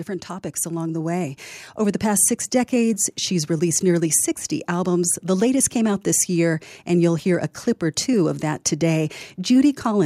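Automatic gain rising runs from 0.62 to 2.34 s: the gain control judged the input too quiet and slowly raised its gain by about 6 dB, so voice and background swell up together, settling just before "decades she's released nearly".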